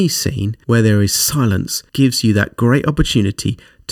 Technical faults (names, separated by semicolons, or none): channel delay (comb filtering)